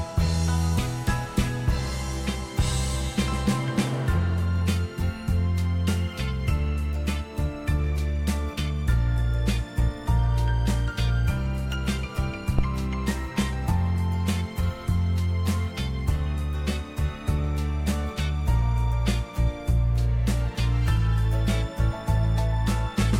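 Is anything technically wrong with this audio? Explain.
Yes. At 12.59 to 12.66 s there is a phantom power thump. A supply was switched on or off on a live input, and its voltage step passed through the coupling capacitors. The result is a deep, low thud peaking at about -10 dBFS that dies away within about 16 ms.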